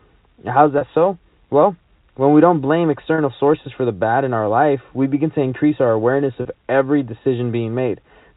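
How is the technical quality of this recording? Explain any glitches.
The recording has three brief glitches from packet loss with pitch repetition, heard through telephone-band G.711 coding with nothing above 4 kHz.

At 0.78–0.81 s, 3.15–3.18 s (between "when we don't blame" and "sources for the bad") and 6.42–6.45 s (after "to increase our awareness"), about 30 ms of audio went missing. The receiver filled each gap by repeating the last pitch period, so you hear a short, slightly held, buzzy sustain rather than the silent hole or click a plain dropout leaves.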